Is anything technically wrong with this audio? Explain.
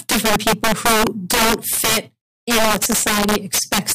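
Yes. Integer overflow runs through the whole speech clip. The signal is driven about 10 dB too hot. Roughly 7 percent of samples exceed the integer limit. Instead of being clamped, they wrap to the opposite sign, so loud peaks become violent, sharp cracks, harsher than clipping.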